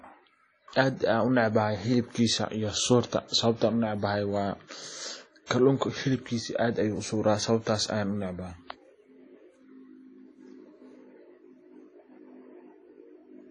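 From the start, the speech carries a ringing, washy coloration. A hiss rises and falls with the level. Nothing is heard above 10 kHz. The damage is plainly audible. This is likely WMA compression, a transform codec. Its quantisation noise smears across each long block. Weak spectral lines are zeroed, and the top end is cut. The thin, swirling result fits a low bitrate around 32 kbps.

From 5.46 to 5.50 s there is pre-echo. A short hiss, about 41 ms long, precedes a sharp attack. The attack itself sounds soft and smeared. The onset falls late in a transform block. The codec spreads its quantisation noise evenly over that block. Noise sized for the loud attack fills the quiet moment before it. So the hiss arrives early, ahead of the attack.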